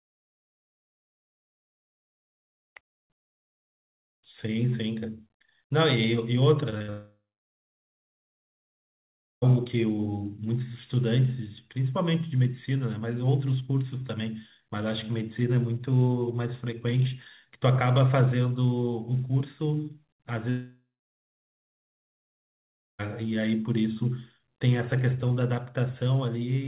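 At 6.70 to 6.74 s and again at 6.78 to 6.82 s the sound briefly smears and wobbles. Each is a short concealed packet loss: about 20 ms of audio never reached the decoder in time, so the receiver improvised a stand-in by extending the preceding sound and then blending back into the real signal.

Immediately after, from 6.82 to 6.90 s, a burst of packet loss follows. Here a held buzz or fading hiss stretches over roughly 60 ms, because several packets in a row were missing and the receiver kept repeating the last sound while turning it down. It leads straight into a much longer gap.

From 6.90 to 9.44 s the audio collapses into a short fading tail and then about 2.2 s of silence before resuming further on, with about 2.5 s of content gone. The same thing happens from 20.50 to 23.01 s, with about 2.1 s of silence. This is a long network dropout, most likely no packets arriving at all for that stretch, so the concealment runs out and nothing is played. 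Throughout, the band stops at 4 kHz, which fits a 64 kbps G.711 mu-law call path.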